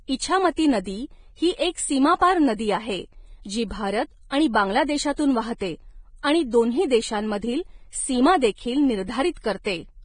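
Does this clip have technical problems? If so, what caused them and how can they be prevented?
Yes. Throughout the speech, nothing is heard above 9.7 kHz and the treble sounds hissy and grainy. This heavy damage is likely Vorbis compression, fitting a bitrate near 23 kbps. Prevent it by encoding at a higher bitrate or quality setting.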